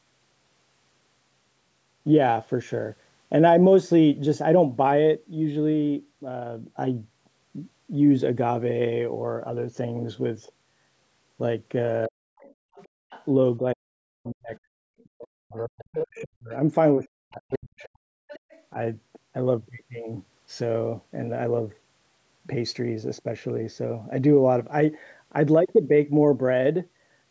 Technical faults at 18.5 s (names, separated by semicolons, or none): speech suppressed in double talk; other side's voice leaking through